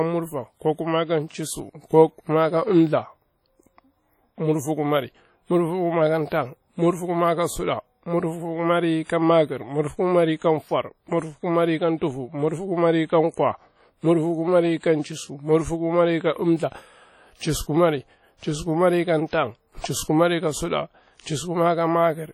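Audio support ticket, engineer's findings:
Ringing, washy texture across the whole speech recording. Hiss rises and falls with the signal. Heavy damage, with weak detail dropped out. Nothing above 19.4 kHz. Likely cause: WMA compression at a low bitrate, consistent with about 32 kbps. Transform codec with long blocks. Quantisation noise smeared over tens of milliseconds. Weak spectral lines zeroed. That produces the ringing and the breathing hiss.

Pre-echo. Short hiss ahead of sharp onsets, attacks softened. 6.29 s, 27 ms, just before "murfikumari ka suɗa murfukumai". 9.04 s, 55 ms, after that phrase and before "ka makir murfukumari ka". 14.77 s, 58 ms. 19.27 s, 57 ms, before "pal chisu kumari ka". Same transform codec. Attack falls late in a block. Noise sized for the loud part spreads into the quiet lead-in.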